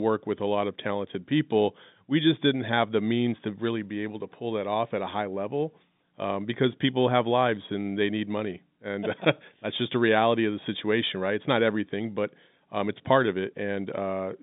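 No technical faults occur anywhere in this speech to describe, beyond its ordinary telephone-band sound.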